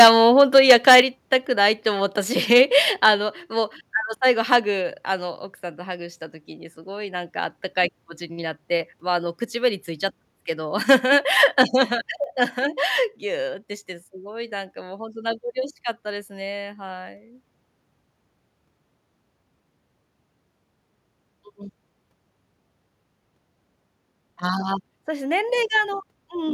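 Microphone overload opens the recording, from 0.0 to 0.1 s and again from 0.39 to 1.0 s. The loudest speech peaks have their tops flattened, giving a harsh, crackling edge. This is likely the microphone's input volume set too high, driving the converter past its limit by about 10 dB and then about 8 dB. In the first burst a large share of the waveform is squared off.

Microphone volume stepped down at 1.02 s, right after that distorted stretch. Speech and background together drop suddenly by about 6 dB. This is likely the call software reacting to the overload by lowering the device's input level in a single step.

Milder microphone overload returns at 2.52 to 2.61 s, 4.52 to 4.56 s, 10.91 to 10.94 s and 11.43 to 11.62 s. Each is a brief gritty edge on a loud peak, about 1 to 2 dB over the limit, with only a small fraction of the waveform clipped. The likely cause is that the reduced input level still leaves too little headroom.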